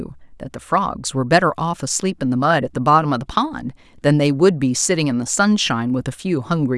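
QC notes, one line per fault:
No faults found on a full listen of this speech recording.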